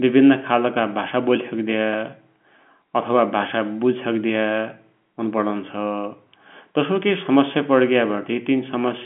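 Nothing's technically wrong with this speech clip; it's ordinary telephone-band audio carried over G.711 coding, so there's nothing above about 3.7 kHz, just as you'd expect from a phone line.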